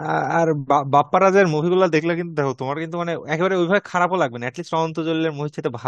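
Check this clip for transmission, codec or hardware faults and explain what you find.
One fault is audible, a short rate change partway through the speech.

Drift correction step, 1.96 to 2.76 s: the speech slows by 5.6% and drops about a semitone, speed and pitch shifting together, then snaps back. A clock-matching resampler likely changed its playback rate in a single jump to rebalance its buffer.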